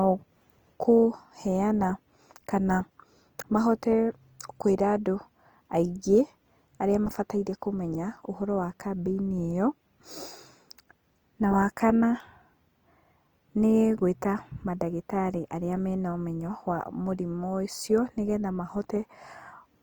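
Throughout the speech, the sound is rough and grainy, with noisy texture where detail should be. It reaches about 20.2 kHz. Likely Opus compression at a low rate near 24 kbps.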